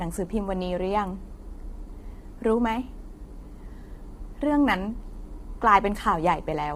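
Throughout, the speech sounds rough and grainy, with noise filling the gaps between harmonics, likely from heavy low-delay AAC compression at a low 24 kbps bitrate.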